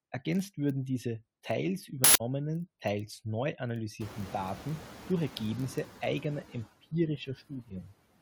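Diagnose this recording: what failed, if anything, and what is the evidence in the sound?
At the buffer stage, a block size mismatch (padded) leaves zero-filled gaps in each block of what fits a 1024-sample read, causing a steady 43.1 Hz buzz and playback at 0.999 speed.

An uninitialised buffer was played before it held audio, so stale memory came out as a loud 160 ms burst of digital noise from 2.04 to 2.20 s.

In call processing, noise suppressor artifacts appear throughout: background noise is pulled down by about 15 dB between phrases and swells under the speech.

The noise suppressor catching up is audible when room noise jumps by about 23 dB near 4.0 s. At first only about 5 dB is removed, then the noise sinks over 1.82 s until 5.82 s.

Speech cut by the noise suppressor occurs between 7.18 and 7.92 s. Roughly 0.4 s of quieter sound is treated as noise and dropped by up to about 15 dB, so those parts sound swallowed.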